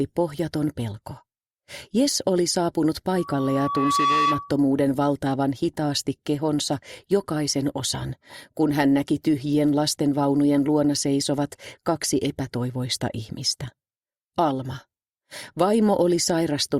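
From 3.15 s to 4.59 s there is loudspeaker feedback squeal: a microphone is picking up its own loudspeaker, and at 1.1 kHz the loop gain exceeds unity. The tone swells over roughly a second into a steady squeal, a few dB louder than the surrounding sound.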